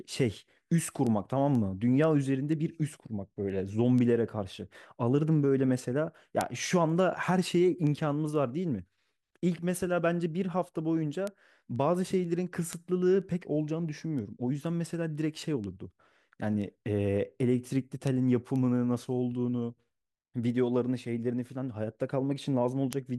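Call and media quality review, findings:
Word clock ticks, 0.58 to 22.93 s: sharp clicks of uneven strength roughly every half second, around fifty in total, on speech. Unlocked digital input, with a clock offset of a few tens of ppm, slips one sample each time. On a spectrogram: evenly spaced thin broadband vertical lines. On a waveform: single-sample steps.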